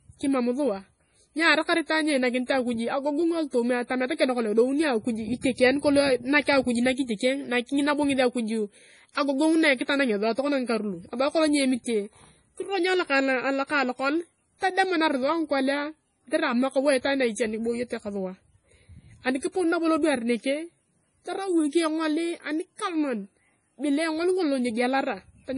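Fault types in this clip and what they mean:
MP3 compression: the treble stops dead around 10.6 kHz and the speech turns watery and swirly throughout, likely a heavy MP3 encode at roughly 32 kbps.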